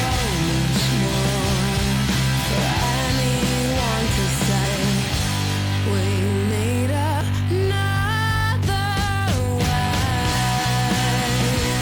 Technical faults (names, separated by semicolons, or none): compressed frames skipped